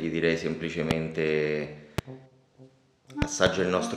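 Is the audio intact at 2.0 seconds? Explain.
No, there's a loud pop from about 1.98 to 2.01 s, a single sharp hit roughly 20 dB above the surrounding sound, which keeps going underneath. It's likely a voltage spike from a plug, switch, static or driver glitch.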